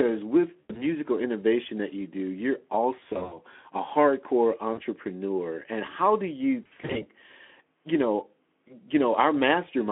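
VoIP packet loss concealed by the speech codec hits at 0.60–0.87 s, 2.99–3.40 s, 4.73–4.81 s and 6.63–7.08 s. With packets missing, the Speex decoder stretches its last pitch and filter, so speech smears into a buzzy tone or coloured noise that fades, and stays weak briefly afterwards.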